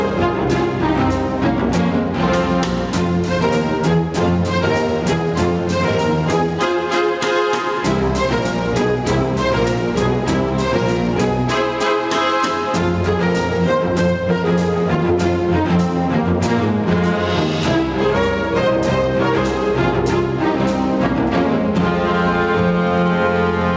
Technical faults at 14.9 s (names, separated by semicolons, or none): gain pumping